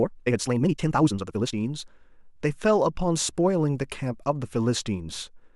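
A time-stretched section runs from 0.0 to 1.54 s in this speech clip, played at 1.94 times speed with pitch unchanged. It sounds rushed, likely from software dropping short pieces to shorten it.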